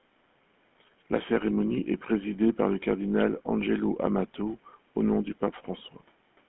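From start to end, the speech has the gravelly buzz of the GSM full-rate codec. It rebuilds the voice from a vocal-tract model driven by sparse pulses. The band runs only from 150 Hz to 3.4 kHz. The roughness is plainly audible and fits a 13 kbps stream.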